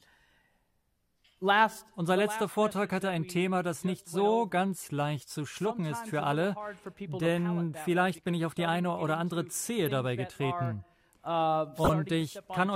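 Two short glitches here, both a corrupt frame decoded: a quiet artifact at about 9.86 s, then a much louder one from 11.84 to 11.90 s. Damaged compressed data got decoded anyway, spraying energy into the wrong frequencies. The second burst peaks around -10 dBFS and sounds like a handful of frames were hit.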